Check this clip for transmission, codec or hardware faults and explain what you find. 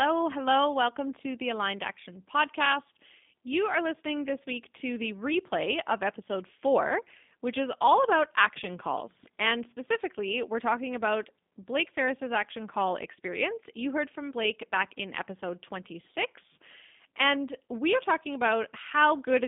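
The speech carries one codec fault throughout the clip. G.729 codec damage runs throughout: the speech is rebuilt from a vocal tract filter, a pitch predictor and a few pulses per subframe instead of the real waveform, which fits an 8 kbit/s G.729A stream. The line band spans about 200 Hz to 3.6 kHz, and nothing above 3.6 kHz survives, so sibilants are dull. The damage is plainly audible as a rough, slightly synthetic texture on every syllable.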